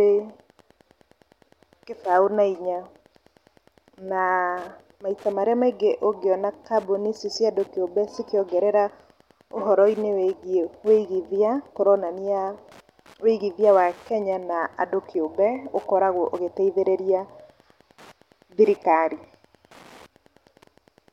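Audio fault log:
throughout, Wi-Fi interference: a faint, steady ticking runs under the speech at just under ten clicks per second, sitting roughly 35 dB below the speech so it is most noticeable in pauses. The ticks repeat every 102.4 ms, the beacon interval of a nearby Wi-Fi radio. Its pulsed transmissions are being picked up and rectified by the audio circuitry, turning each beacon into a short audible click.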